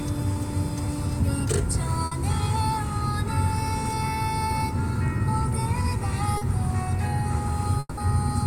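A recording of everyday sounds carries three kinds of network damage. Short concealed packet loss appears at 0.33 s and at 6.37 to 6.43 s. About 20 ms and then 40 ms of audio never arrived, and the receiver bridged each hole by extending the preceding sound, which leaves a brief smear or wobble. At 2.05 to 2.13 s a burst of packet loss removes 60 ms. The decoder carries the last sound forward and turns it down, so a short held buzz or fading hiss replaces the real material before playback resumes further on. From 7.79 to 7.99 s, 180 ms of synthesized continuation fades into about 20 ms of silence, and the sound returns with that stretch missing. The likely cause is a long network dropout.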